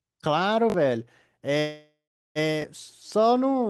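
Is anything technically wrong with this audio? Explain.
Yes. The speech has two kinds of fault: a repeated buffer that occurs twice, and one call audio freeze.

Repeated buffer, 0.70 to 0.74 s and 2.62 to 2.64 s: fresh audio missed its deadline, so the output re-sent the last block. The repeat length fits a 20 ms buffer. At 0.70 s that block plays two extra times, and at 2.62 s once more. Each repeat joins abruptly, so the sound is a quick stutter or buzzy click. Roughly a few tens of milliseconds of real audio get displaced.

Call audio freeze, 1.59 to 2.38 s: the speech stops and the last sound is stretched into a decaying buzz. That buzz drops to silence for about 390 ms before the speech resumes. The fill totals 761 ms. Nothing is missing afterward; the speech simply continues from where it halted, now 761 ms later than before. This is likely a stalled packet stream that drained the jitter buffer, with concealment covering the wait.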